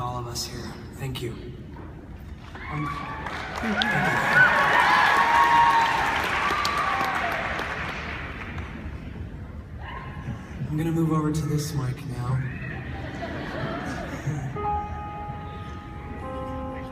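No technical faults are audible.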